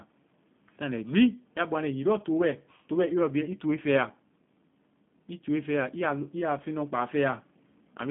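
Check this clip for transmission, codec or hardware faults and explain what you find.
One fault runs through the whole recording: G.729 codec damage, plainly audible from start to finish. The speech passes only from 150 Hz to 3.5 kHz and has the slightly rough, synthetic edge of a low-rate CELP coder, which fits G.729A at 8 kbit/s. The codec discards the waveform and rebuilds each 10 ms frame from a vocal-tract filter, a pitch predictor and a few sparse pulses, so fine detail is lost. On a spectrogram, energy stops sharply at 3.5 kHz, and the harmonics look smeared and grainy.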